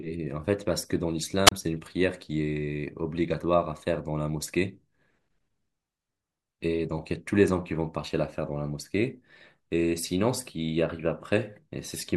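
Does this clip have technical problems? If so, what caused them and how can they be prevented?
Yes. There is a wireless microphone squelch dropout from 1.46 to 1.52 s. The radio link between the analogue FM transmitter and its receiver weakened. Hiss rose briefly as the signal faded. The receiver's squelch then cut the output, leaving a hole of near silence lasting about 30 ms. The speech then came back. Prevent it by keeping a clear line of sight to the receiver, using diversity antennas, and checking batteries and frequency coordination.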